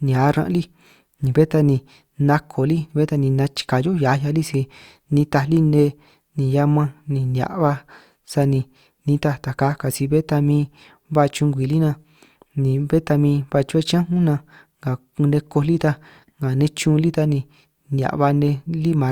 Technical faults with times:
none

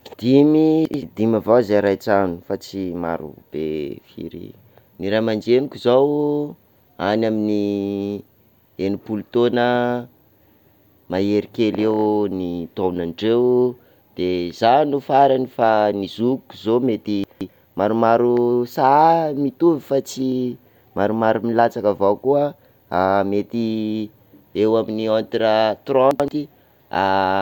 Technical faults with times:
0.85-1.02 chunks out of order
17.24-17.49 chunks out of order
26.11-26.28 chunks out of order

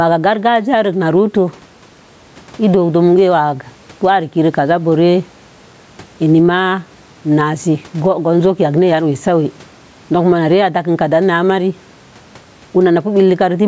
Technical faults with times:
0.00-13.67 gain pumping

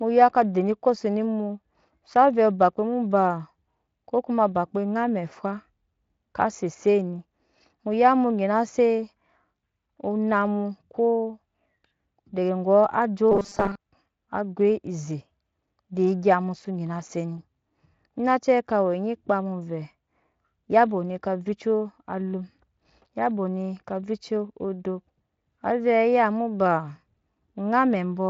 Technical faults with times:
13.32-13.80 robotic sound from repeated short buffers

